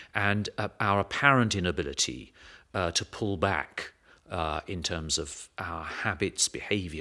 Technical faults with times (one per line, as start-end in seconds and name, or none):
none